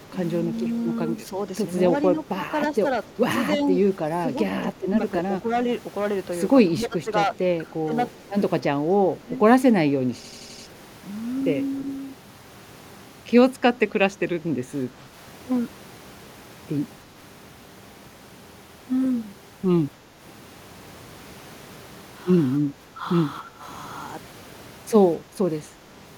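Hard clipping runs through the whole clip. The speech is driven about 11 dB past what a stage in the chain can pass, so a small share of peaks is sliced flat. Those squared-off tops add high harmonics, heard as a harsh crackle riding the louder syllables.

Speech suppressed in double talk first appears as a slight dip from 0.07 to 0.13 s. It returns more strongly between 2.12 and 9.4 s, where about 1.5 s of the talker sinks by up to roughly 10 dB, in patches that sound thinned and pushed back. The likely cause is an echo canceller that could not tell this voice from incoming far-end audio and turned both down.

Echo leak comes from 7.34 to 7.71 s: a faint copy of the speech, about 30 dB below it, trails the original by 273 ms. It is most likely loudspeaker sound that reached a microphone and slipped past imperfect echo cancellation.

System hang loop hits at 10.24 s and lasts to 10.67 s. 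A 85.33 ms slice repeats five times at 11.7 Hz, a stuttering judder that replaces about 0.4 s of audio. It points to a frozen process while the hardware kept replaying a ring buffer, which fits a 4096-sample buffer.

Double-talk suppression recurs from 14.42 to 15.14 s as shallow dips of up to about 5 dB. It then deepens from 22.73 to 23.64 s, where around half a second drops by up to roughly 10 dB.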